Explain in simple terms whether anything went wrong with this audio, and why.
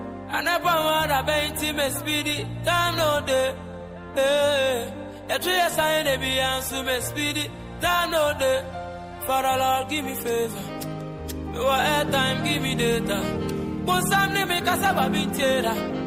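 Nothing went wrong with this audio that a listener can pick out. No moment in it stands out as a technical problem, so there is nothing here to explain or fix.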